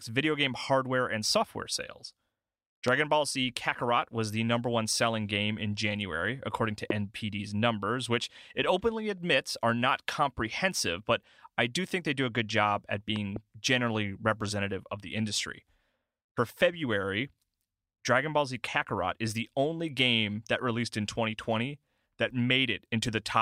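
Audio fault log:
2.88–2.90 s, 6.90–6.93 s (after "according to", before "numbers which it openly") and 13.16–13.38 s (after "a good job at", a double pop before "generally representative of the"): loud pop, likely from a voltage pulse from a plug, switch or static entering the chain, heard as sharp thumps about 20, 15 and 10 dB above the speech, which continues underneath. Each shows as a tall waveform spike and a thin broadband vertical stripe on the spectrogram.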